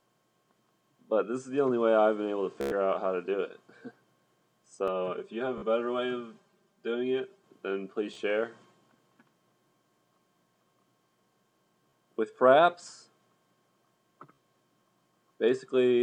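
At 2.61 to 2.72 s, packets on the wireless link arrived late or went missing, and the receiver kept replaying its last buffer. The result is a Bluetooth stutter: a rapid machine-gun repeat covering about 100 ms, after which the sound jumps ahead as though it had kept playing.

From 4.88 to 7.44 s, one channel lags the other by around 5 ms and the two are summed to mono. This channel delay (comb filtering) cancels evenly spaced frequencies starting near 100 Hz, leaving the sound hollow and phasey.

Within that stretch, at 5.58 to 5.63 s, another stutter drops about 44 ms. Shorter ones follow at 8.14 to 8.17 s and 11.90 to 11.93 s, each losing 29 ms. A final stutter at 14.37 s drops about 44 ms.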